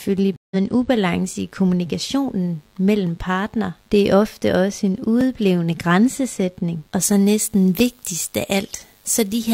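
A mains buzz runs under the speech for the whole clip. It is a faint, raspy 50 Hz hum, roughly 40 dB below the voice. Interference from a dimmer, rectifier or poorly shielded cable adds sharp switching spikes twice per mains cycle, so the hum carries a ladder of 50 Hz harmonics into the kilohertz range. On a spectrogram this shows as evenly spaced horizontal lines across the full width. Zoomed in, the waveform shows small spikes repeating every 10 ms.

From 0.36 to 0.56 s there is a stream reconnect. The connection dropped and the player fell silent for about 0.15 s. It then restarted its decoder mid-stream and picked up roughly 150 ms further on, so a slice of audio is simply missing. The sound returns with a brief muted or faded onset on "en ubalance i kommunikationen". A spectrogram shows a clean blank vertical gap followed by energy that builds in rather than starting abruptly.

From 7.02 s, after "en udblevende grænsesætning og", to the end, pre-emphasis was left on. 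A 50 µs FM-style treble boost was applied without the matching de-emphasis, so 10 kHz sits about 10 dB hotter relative to 1 kHz than it should. The voice turns thin, bright and hissy, with exaggerated sibilants. On a spectrogram the upper bands suddenly look denser and brighter from that point onward.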